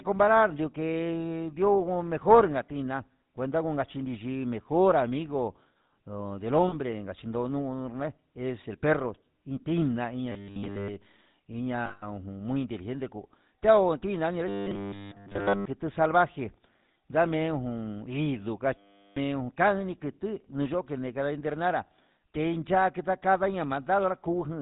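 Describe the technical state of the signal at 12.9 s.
At 12.9 s the speech carries GSM full-rate codec damage, present throughout rather than at that moment alone. The codec rebuilds the voice from a vocal-tract filter driven by sparse, regularly spaced pulses, which gives a plainly audible buzzy, gravelly roughness that fits the 13 kbps full-rate GSM coder. On a spectrogram everything stops at a hard ceiling near 4 kHz, and the harmonics look coarse and smeared. The waveform shows a rough, pulse-driven texture.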